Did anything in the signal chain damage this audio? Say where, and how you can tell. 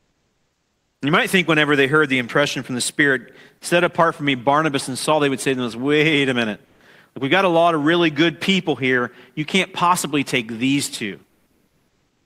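Yes, at the codec: comfort noise in place of the background at 0.00–1.01 s, 6.65–6.80 s after "them wait a minute", and 11.26–12.26 s after "possibly take these two". Pauses turn steady and featureless, about 3 dB quieter at first, likely Opus DTX synthesising noise; a gate would leave silence.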